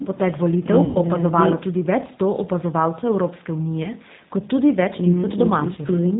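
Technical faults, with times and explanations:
Throughout, G.729 codec: speech was squeezed through a narrowband low-rate codec, which fits G.729A at 8 kbit/s. Each 10 ms frame is rebuilt from a vocal-tract filter, pitch predictor and a few pulses, so nothing passes above 4 kHz and the voice sounds plainly rough and synthetic.
0.85–0.99 s, 3.83–3.90 s and 5.73–5.80 s, VoIP packet loss concealed by the speech codec: packets went missing, which fits about 100 ms, 20 ms and 40 ms of lost audio. The decoder extended its last pitch and filter at falling gain, producing a buzzy tone or coloured noise that fades, and it sounds weak briefly afterwards.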